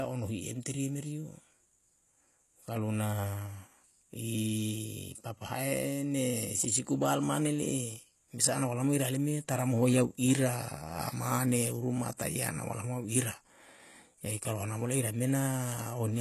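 HE-AAC compression is the likely cause of the plainly audible damage heard throughout the speech. Nothing sounds above 12.3 kHz, and the treble is rebuilt from copied lower bands rather than coded, leaving s sounds gritty and lispy, which fits a bitrate around 16 kbps.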